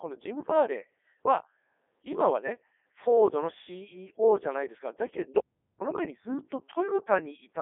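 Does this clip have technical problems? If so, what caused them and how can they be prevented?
Yes. Throughout the speech the Codec 2 vocoder is at work, at 3.2 kbit/s. The decoder rebuilds the voice from sine waves driven by pitch, voicing, energy and a spectral envelope, so the original waveform never arrives. The result is robotic and buzzy, confined to about 300 Hz to 3.5 kHz with nothing above 3.6 kHz. Unlike ordinary low-bitrate codec smearing or simple band-limiting, the voice sounds synthetic rather than just muffled or warbly. Sending the audio through a higher-rate waveform codec instead would prevent this.

From 5.39 to 5.81 s there is an audio dropout to silence lasting 0.42 s. The sound stops mid-flow and returns abruptly, and the gap is silent with no room tone, which sets it apart from a noise gate or a quiet pause, where some background remains. The likely cause is that the input was briefly lost, through a loose connection, a failed link or an accidental mute, while recording carried on. 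Securing connections and monitoring the input signal would prevent it.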